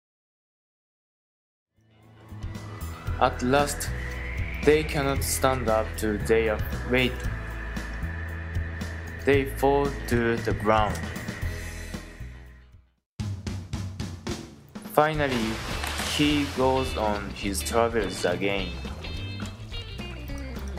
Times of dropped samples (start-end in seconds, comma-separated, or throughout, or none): none